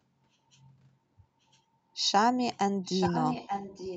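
From 2.84 s to the end, a delayed copy of the speech returns about 0.88 s late, only slightly quieter. This echo leak is likely from an incompletely cancelled loudspeaker pickup.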